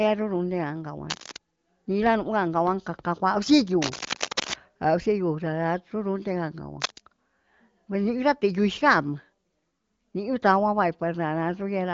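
Cable scratch noise occurs at 1.08 to 1.39 s, 3.82 to 4.54 s and 6.80 to 7.00 s: rough, rustling bursts over the speech, the first slightly below it, the later two about as loud. A worn cable or connector being moved, with its contact resistance jumping erratically, is the likely cause.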